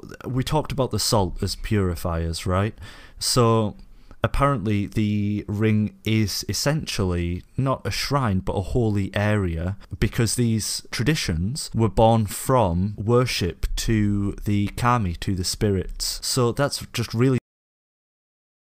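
At 17.38 s the speech just stops dead, a cut-off end: the final buffers were never written out, so the sound is chopped mid-utterance and drops straight to digital silence with no natural decay, leaving about the last 1.3 seconds empty.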